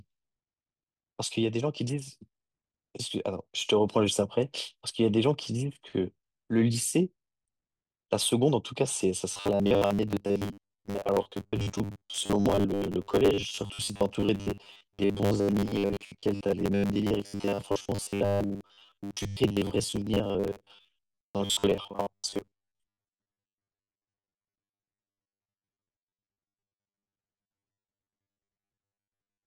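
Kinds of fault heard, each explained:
Robotic sound from repeated short buffers: from 9.32 s to the end, the speech becomes a rigid metallic buzz at 100 Hz. Audio likely arrives too seldom, so the last buffer is replayed instead. The pitch fits a 10 ms buffer, and most real audio is skipped.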